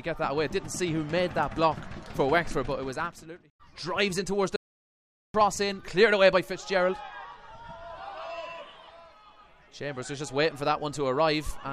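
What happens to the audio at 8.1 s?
Nothing goes wrong at 8.1 s; the audio plays through that moment intact, with no dropout, click or other fault to be heard.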